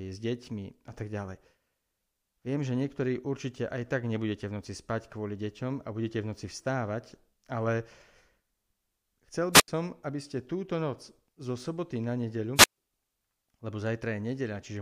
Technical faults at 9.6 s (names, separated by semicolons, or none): wireless microphone squelch dropout